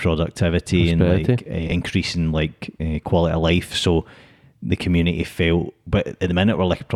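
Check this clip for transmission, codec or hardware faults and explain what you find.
One transmission fault is present. From 1.67 to 1.72 s, frames are out of order: two adjacent 20 ms frames were swapped and decoded in that sequence, so a 40 ms stretch plays with its halves exchanged. It is heard as a brief garbled flutter, and no time is lost.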